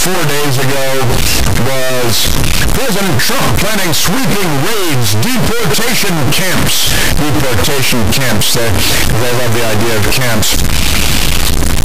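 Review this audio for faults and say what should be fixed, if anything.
A stuck bit runs through the whole speech clip. The sound is harsh and buzzy from start to finish, and the pauses fill with loud noise. About half the samples jump by a fixed step near -5 dBFS. That is a high-order bit held at one value, likely from a faulty converter or a broken data line. Check the converter and its wiring with a test signal before recording, and re-record this clip.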